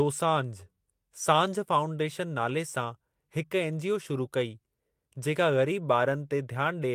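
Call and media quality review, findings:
No audible faults found in this speech recording; nothing to raise against any component.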